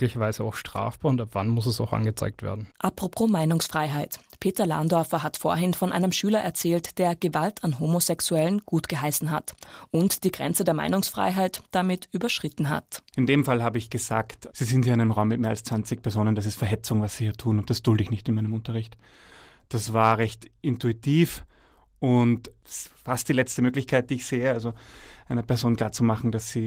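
No technical faults can be heard in the speech. The Opus voice compression leaves only light coding traces and keeps the full audio band, which fits its hybrid mode at around 24 kbps.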